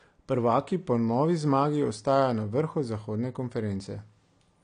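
From start to finish the speech carries AAC compression damage. Nothing is present above about 9.8 kHz, so the sound is dull and lacks air. The damage is plainly audible. Sibilants turn fizzy and sustained sounds warble and smear. The likely cause is lossy AAC-LC coding at a low bitrate. The encoder quantises each frame's frequency lines coarsely and drops the top band. The amount of damage fits a rate around 32 kbps.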